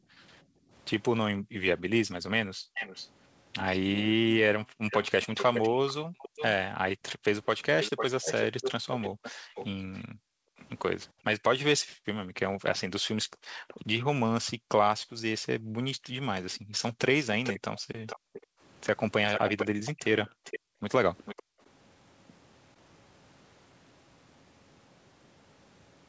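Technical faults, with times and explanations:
0.0–2.74 s, 4.64–6.18 s, 9.1–18.6 s and 20.26–21.6 s: background gated by the echo canceller. While far-end audio played, the canceller clamped the microphone, so room sound drops by up to about 40 dB in brief holes (about a second, a third of a second, three seconds in total, half a second). These show as sudden near-silent gaps in the waveform's noise floor and blank vertical bands across the spectrogram.
2.74–3.09 s, 4.9–10.66 s and 16.55–21.43 s: echo leak. A fainter delayed copy of the speech trails the original by 409, 498 and 450 ms, at about 10, 5 and 10 dB below it. This is likely residual loudspeaker sound the echo canceller failed to remove. On the spectrogram, it appears as repeated harmonic patterns shifted right, and in the waveform as smeared low-level bursts after each phrase.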